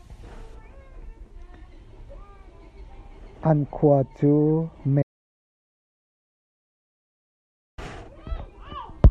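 Audio dropout to silence from 5.03 s to 7.78 s in this speech recording: the sound stops abruptly mid-flow and resumes just as suddenly, leaving about 2.76 s of silence with no room tone underneath. The cause is likely a momentary loss of the input signal, such as a disconnected device, a broken link or an accidental mute, while recording continued and filled the gap with silence. Whatever was spoken during that stretch is lost.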